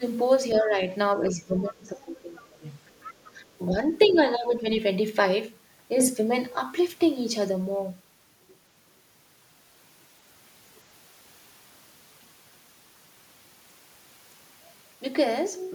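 Speech suppressed in double talk runs from the start of the clip, at 0.0 s, and again from 0.62 to 2.65 s and from 3.32 to 4.66 s. The level dips by about 15, 20 and 10 dB. The likely cause is the echo canceller turning down the near talker while the far side was also speaking. These dips coincide with overlapping talk, which sets them apart from a plain gain change.

The other side's voice leaking through is heard at 0.53 s, 1.65 to 1.74 s, 2.35 to 3.32 s and 4.01 to 4.18 s, roughly 20 to 25 dB under the speech. This is likely residual loudspeaker echo. It is a faint second voice rather than a loss of level.

A sudden gain jump at 6.0 s raises the level by about 6 dB. A second jump, from 13.72 s to the end, lowers it by about 5 dB. Both are likely unramped digital gain steps, in which speech and background noise move together in a single step.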